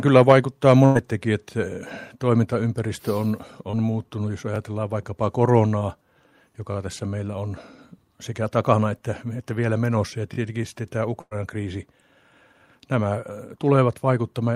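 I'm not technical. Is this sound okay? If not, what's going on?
No, there are a few glitches in this speech, all from the connection hiccupping.

Twice there's a burst of packet loss: around 0.85 to 0.97 s, and again at 11.21 to 11.33 s, right after "sitten tämä". About a tenth of a second went missing each time. The receiver covered the gap by stretching the last sound into a fading buzz or hiss, then jumped ahead.

At 3.71 s, between "toimintaympäristö on" and "muuttunut jos", there's a short concealed packet loss. Roughly 20 ms never arrived, so the gap got patched by continuing the previous sound. You'd hear just a tiny smear or wobble there.

Then there's a repeated buffer, three times. When fresh audio wasn't ready, the device replayed the same 20 ms chunk. That happened once at 4.56 s, and twice in a row at 6.72 to 6.76 s (just before "tässä meillä on") and at 10.34 to 10.38 s. Each one sounds like a quick click or buzzy stutter.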